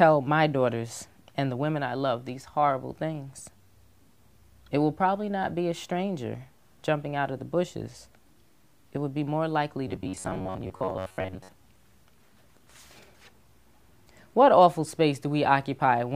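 From 9.88 to 11.50 s the sound turns into robotic sound from repeated short buffers: a rigid, metallic buzz fixed at 93.8 Hz. The likely cause is late-arriving audio, with a segment of about 10.7 ms looped over and most of the real signal skipped. Unlike dropouts, there are no silent gaps.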